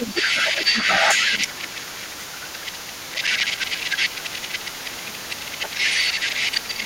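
From the start to the end at about 6.85 s, a second voice runs under the talker at roughly the same level. This is the other side's voice leaking through. It is likely that the device played the far end on a loudspeaker and the echo canceller left much of it in the microphone signal. It stays present throughout the clip.

The talker's own speech dips from 0.0 to 1.74 s, again from 1.92 to 5.92 s, and once more from 6.27 s to the end. The deepest drops are around 10 dB. The voice sinks and thins while the other voice is active. This is speech suppressed in double talk. With both sides talking at once, the canceller likely could not tell the talker from the echo, and turned both down.

From 3.14 to 3.69 s, a burst of gritty crackle rides on top. This is processor overload crackle. The processor missed a run of deadlines, perhaps ten. Each missed buffer became a tiny silent gap with hard edges. 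The gaps fit buffers of about 5 ms. The tearing stops once the load eases.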